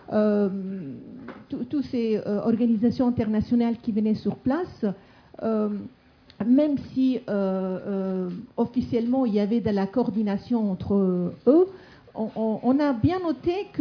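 No technical faults can be heard anywhere in the clip.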